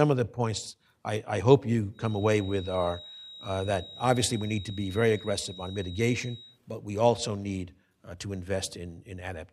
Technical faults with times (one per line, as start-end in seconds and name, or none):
1.91-6.60 feedback whistle